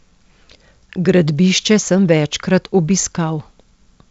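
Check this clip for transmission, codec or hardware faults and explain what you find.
Nothing stood out on listening to this speech, which carries the band-limited character of G.722 wideband telephone coding at 64 kbit/s, with nothing above about 7.8 kHz.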